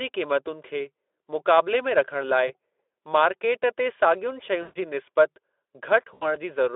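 At 2.47–2.52 s, 4.61–4.79 s and 6.13–6.36 s the speech drops out into VoIP packet loss concealed by the speech codec, here the Speex decoder heard elsewhere as narrowband, band-limited sound. Each gap fits roughly 20, 140 and 80 ms of missing audio. The decoder repeats its last pitch and filter with falling gain, so each gap sounds like a buzzy tone or coloured noise that fades. On a spectrogram, flat repeated harmonics fade out. In the waveform, a periodic, decaying envelope appears.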